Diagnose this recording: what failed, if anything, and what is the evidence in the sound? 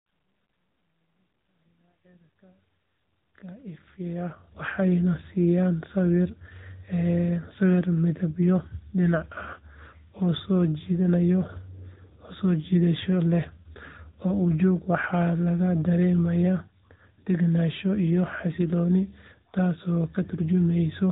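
Codec stage: AMR narrowband mobile codec throughout. Nothing passes above 4 kHz. A pulse-driven vocal-tract model leaves the speech plainly buzzy and synthetic, which fits about 10.2 kbps.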